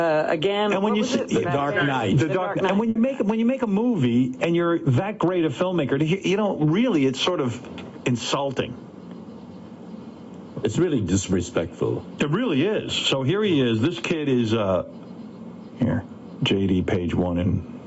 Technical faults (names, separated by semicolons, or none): gain pumping; burst of packet loss